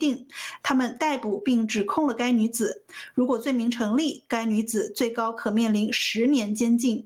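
Throughout, gain pumping: the gain swings by around 20 dB, likely from excessive input gain driving a fast limiter.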